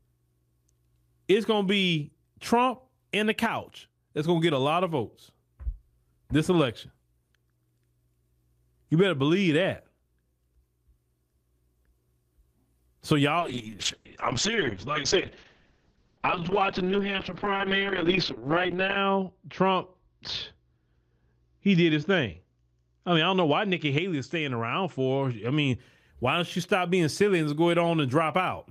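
From 13.4 to 25.85 s there's a call bitrate drop, sounding like roughly 32 down to 6 kbps. Highs above 8 kHz vanish, leaving muffled, watery audio until "why don't you stop".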